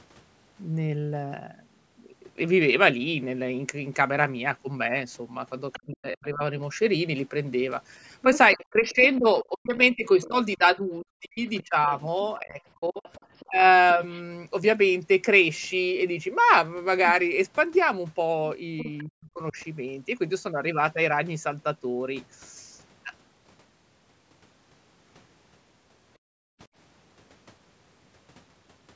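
At 5.73 s a faint second voice slips in under the talker, about 25 dB down. This is the other side's voice leaking through. The likely cause is a loudspeaker playing the far end while the echo canceller fails to clear it from the microphone. The scrap is brief, ending at 5.97 s. From 5.76 s to 6.42 s the talker's own speech is suppressed in double talk. The likely cause is the canceller confusing the talker with the echo and turning everything down. The voice sinks by roughly 40 dB for about half a second.

The pattern returns at greater length. From 8.22 s to 14.19 s the far-end voice leaks through, around 20 dB below the talker. Across 8.25 s to 14.01 s the talker keeps dipping, by up to about 30 dB. About three seconds of that stretch are affected in pieces. The voice thins out and drops away, likely where the two overlap.

A short repeat comes at 18.78 s. The leaked voice lasts until 19.04 s, about 20 dB down. 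The talker's speech is pulled down by roughly 40 dB between 18.84 s and 19.57 s. Those cuts add up to about 0.4 s.

At 26.18 s the room sound itself vanishes. This is background gated by the echo canceller. The canceller clamps the microphone while the loudspeaker plays. The ambience falls by about 38 dB and returns at 26.59 s.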